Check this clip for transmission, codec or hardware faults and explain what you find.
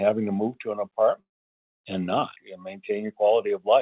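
One fault stands out, a long network dropout, heard through a narrowband call path with nothing above 4 kHz, as G.711 mu-law gives. From 1.2 s to 1.73 s the sound smears into a fading buzz and about half a second of near-silence, then it resumes with roughly 0.5 s missing. The likely cause is lost packets, with the receiver briefly extending the last audio before giving up.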